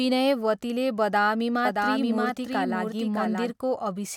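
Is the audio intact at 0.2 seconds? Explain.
Yes, the audio is intact at 0.2 seconds, with no fault audible at that moment.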